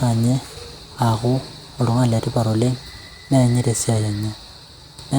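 Speech recording with no audible technical faults.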